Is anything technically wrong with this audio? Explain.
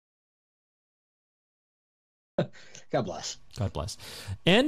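Yes, there are two faults.

Audio dropout to silence, from the start to 2.38 s: the speech input was already lost when the clip begins, likely through a disconnected device or failed link, and silence was written instead. The gap is dead silence with no room tone, and the speech comes in abruptly afterwards.

DAB burbling, 4.00 to 4.14 s: weak reception let bit errors slip past error correction into the MP2 data, at a low error rate of a fraction of a percent. Corrupted samples put short noise blips in single sub-bands, and corrupted scale factors make sub-bands jump in level. The result is a brief disturbance over the speech, which fits about seven damaged frames.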